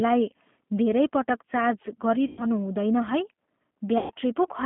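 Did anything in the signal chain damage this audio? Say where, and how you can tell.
Yes. The codec stage damaged the whole clip. The speech is band-limited to a telephone line of roughly 150 Hz to 3.5 kHz and has a rough, slightly synthetic texture, which fits an 8 kbit/s G.729 coder. That coder rebuilds each 10 ms frame from a vocal-tract filter, a pitch predictor and a few pulses. On a spectrogram nothing shows above 3.5 kHz or below about 150 Hz, and harmonics look smeared and grainy rather than cleanly striated.

The network stage also lost packets, and the codec concealed the losses, in two places: 2.27 to 2.46 s and 3.98 to 4.12 s. The losses span about 100 ms and 120 ms, which fits five and six 20 ms packets. The decoder extrapolated from its last pitch and filter at falling gain, so the speech stretches into a buzzy tone or coloured noise that fades. Because each frame builds on the previous one, the sound stays weak after packets return. 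On a spectrogram and waveform this shows as stretched, unchanging content decaying in level.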